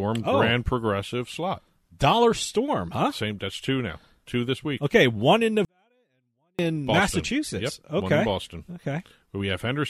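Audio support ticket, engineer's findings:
24-bit alignment error (too quiet), 5.65–6.59 s after "one in": speech drops about 48 dB, clean and still present, unlike a dropout. Low-bytes 24-bit samples read as 32-bit integers.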